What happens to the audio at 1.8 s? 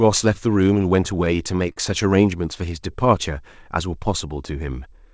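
A short stall from a late packet runs from about 1.72 to 1.79 s. A packet arrived late, the jitter buffer ran dry, and the receiver stretched the last bit of sound for about 42 ms until the packet came in, then resumed from the same point. Nothing is lost, but that sound is held slightly too long with a faint buzzy or dipped quality, and everything after it plays about 42 ms later, all within the call codec's band that stops at 8 kHz.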